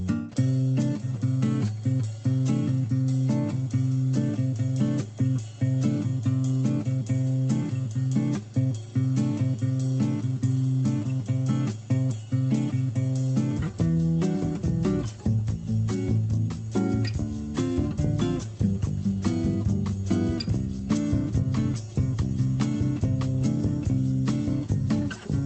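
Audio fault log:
No faults are heard in this clip. The audio passes over a WebRTC call path, and its top end stops at about 8 kHz, which fits an Opus call codec running wideband.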